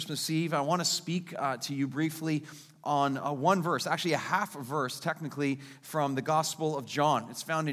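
No technical faults can be heard anywhere in the clip. Nothing interrupts, distorts or drops out of the sound at any point.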